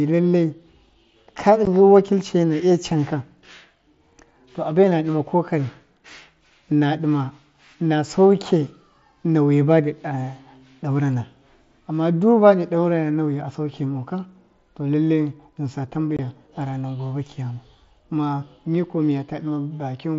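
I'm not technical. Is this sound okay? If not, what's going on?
No. This is unconcealed Bluetooth headset packet loss. Tiny bits of speech got lost between headset and phone, leaving abrupt gaps: one at 1.65 s, another from 16.17 to 16.19 s, after "saukemoka to lalle ghɨnsa".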